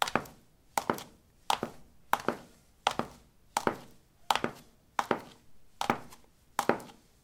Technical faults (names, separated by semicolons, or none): none